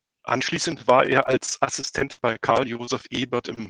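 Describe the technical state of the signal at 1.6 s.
At 1.6 s the speech sits inside a stretch of repeated packet loss, from 1.23 to 2.89 s. Seventeen short gaps, none longer than 40 ms, are each patched by extending the preceding sound. About a fifth of the span is filled this way. It sounds choppy and robotic.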